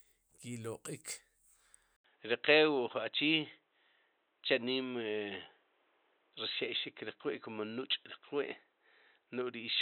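At 1.96 s the speech drops out for 80 ms. When it returns, the sound is dull and boxy, with nothing above 4 kHz. A faint new background noise sits well below the speech, while the loudness stays roughly the same. The change holds to the end of the clip. The likely cause is an input switched to a poorer device, such as another microphone or a headset's call profile, which passes a narrower band and brings its own noise.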